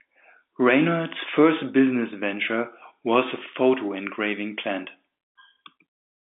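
Telephone-band speech carried over G.711 mu-law at 64 kbps, with the line passing roughly 200 Hz to 3.6 kHz, nothing above 3.8 kHz, and no technical fault present.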